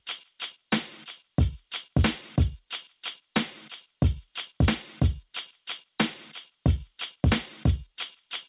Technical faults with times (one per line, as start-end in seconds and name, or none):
0.00-8.49 gain pumping